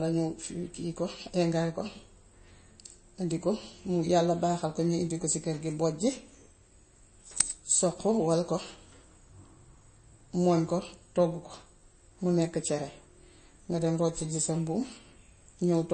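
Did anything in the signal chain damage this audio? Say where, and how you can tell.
Yes, at the codec stage, across the whole speech clip: this sounds like MP3 compression, likely the cause of the damage, and plainly audible. Nothing survives above 8.3 kHz, so s sounds lose their sharpness and the speech takes on a watery, swirling texture, which fits a low bitrate near 33 kbps. On a spectrogram there is a hard horizontal ceiling at 8.3 kHz, with weak upper bands blinking on and off between frames as the encoder zeroes them.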